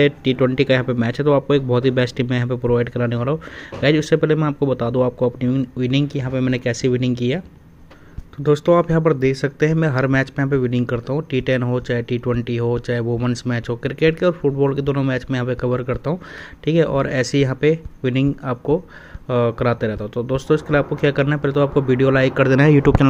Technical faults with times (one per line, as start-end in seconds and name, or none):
16.38 dropped buffer (overrun)